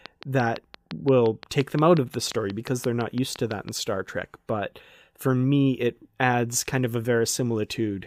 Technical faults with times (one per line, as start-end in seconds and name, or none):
0.06-3.70 train of clicks